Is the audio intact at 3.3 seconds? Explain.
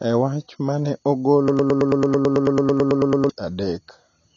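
No. The point at 3.3 s falls right where a broken-record loop lets go. From 1.48 s to 3.29 s, just after "wach ma ne", a fragment of about 110 ms repeats back to back, sixteen times, most likely because the player or stream stalled and kept resending its last buffer. The audio that belonged in that span is gone. Unlike a stutter or dropout, there is no gap or jumble: the same sliver recurs identically, giving a steady rhythm near 9 Hz until normal playback resumes at 3.29 s.

The whole clip, including this moment, also carries AAC compression damage. Nothing sounds above about 7.1 kHz, and the remaining band is dull and smeared, with a fizzy, warbling texture on sustained sounds and sibilants. This fits AAC-LC at a low bitrate around 24 kbps, which likely caused it. The encoder quantises its frequency lines coarsely, leaving holes and noise-filled bands. A plain low-pass filter would sound clean below its cut-off, without this swirl.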